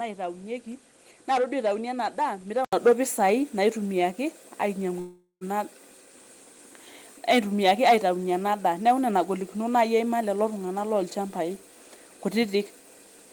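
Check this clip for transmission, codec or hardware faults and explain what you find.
Two faults are audible in this speech clip.

From 0.0 to 2.73 s, before "pisai naitumiaki", the input likely switched to a poorer device. Nothing above 11.4 kHz, a level about 5 dB quieter and different background noise all shift together after an 80 ms gap, unlike a codec bandwidth change.

From 4.99 to 5.44 s there is likely a long network dropout. About 415 ms of fading concealment ends in 80 ms of silence, and 420 ms of speech is skipped rather than merely smeared.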